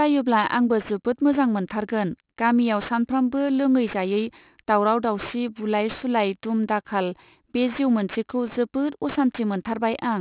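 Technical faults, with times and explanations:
Throughout, aliasing: the speech was resampled to what sounds like an 8 kHz rate without a low-pass filter, so content above 4 kHz folds back below it as unrelated tones, roughly 20 dB under the speech. Sibilants turn gritty and metallic.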